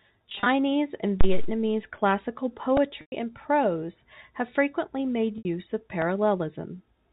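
From 0.30 to 0.46 s the speech turns briefly buzzy and held in several tiny bursts. This is packet loss with pitch repetition: about 110 ms went missing, scattered over 160 ms in runs of up to 30 ms, and the receiver bridged each gap by repeating the last pitch period.

Between 1.21 and 1.63 s a deep, low thump lands and dies away within about 95 ms. This phantom power thump comes from a supply being switched on a live input, with the voltage step pushed through the coupling capacitors.

At 2.77 s, just before "and prose have frequently", a tiny click or buzz snaps past. This is a repeated buffer: new audio arrived late, so the same sliver played three extra times with hard joins. Each repeat lasts 1.33 ms, which fits a 64-sample buffer, and a few milliseconds of audio are lost.

From 3.01 to 3.12 s, also just before "and prose have frequently", the voice again fades into silence as about 110 ms of packets are covered by pitch repetition, and the speech returns with a short cross-fade. 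From 5.38 to 5.45 s, right after "prose have frequently made", a further 70 ms is bridged in the same way and fades into silence before the speech returns.

At 6.02 s the repeated-buffer click returns, again three extra plays of a 1.33 ms piece. The telephone band limit of G.711 coding can be heard throughout, with nothing above 4 kHz.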